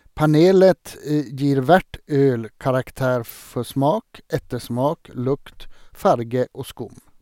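No audible technical faults.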